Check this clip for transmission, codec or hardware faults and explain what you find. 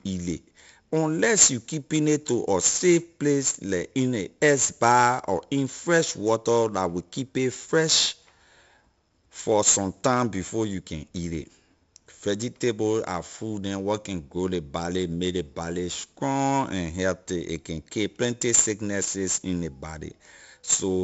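There's one codec fault, and it runs through the whole clip: 4-bit ADPCM compression, and it's heavy. Each sample is stored as a coarse 4-bit step from a predicted value, with the step size adapting as the speech moves. The error that leaves is broadband noise riding on the signal, so every loud syllable carries a gritty hiss, and sharp onsets get roughened where the step can't grow fast enough. Nothing reaches above 7.7 kHz, which dulls the top end and fits a 64 kbps stream.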